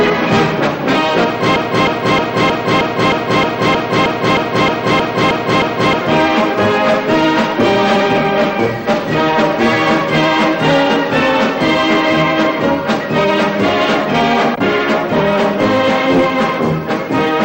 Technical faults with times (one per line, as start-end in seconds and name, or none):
1.56-6.01 broken-record loop